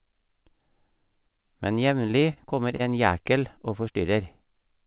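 Short stalls from a late packet occur at 2.33–2.38 s and 2.76–2.81 s in this speech. Each time, the jitter buffer ran empty, so the receiver stretched the last sound by about 28–29 ms and then resumed from the same point. Nothing is lost, but the sound is briefly held with a faint buzz or dip, heard through a call path with nothing above 4 kHz, which fits G.711 mu-law.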